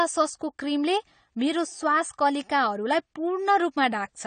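From start to finish the speech sounds dull and smeared, with nothing above 9 kHz and a warbling, fizzy edge on sibilants. This is likely AAC compression, with AAC-LC starved of bits at a rate that fits roughly 32 kbps.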